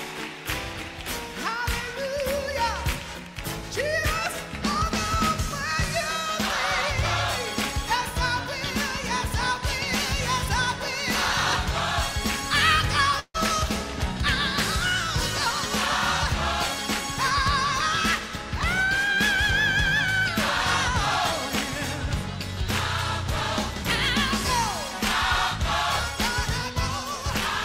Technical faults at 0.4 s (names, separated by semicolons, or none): none